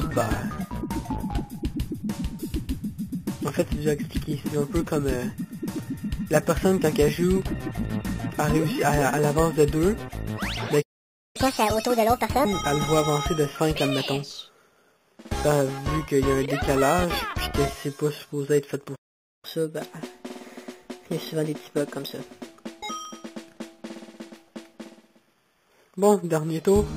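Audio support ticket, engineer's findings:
Sample clock jitter: hiss/roughness throughout, rising with loud and bright passages, gone in silence. Converter clock wander of a few microseconds; error roughly 30 dB under signal.

Overlap between stream segments: micro-skips at 3.10, 7.08, 19.06–19.08 and 23.05 s, on a 4 s segment grid. Overlapping timestamps make the player trim real audio, so the waveform jumps.

Playback stall: output drops out mid-flow at 10.82–11.36 s (about 0.54 s) and 18.95–19.45 s (about 0.48 s). Likely buffer underrun or blocked audio thread.

Catch-up at higher speed: after each stall the backlog is resampled. 1.5× at 11.36–12.45 s, pitch up roughly a fifth. 1.1× at 19.45–22.45 s, roughly a semitone and a half up.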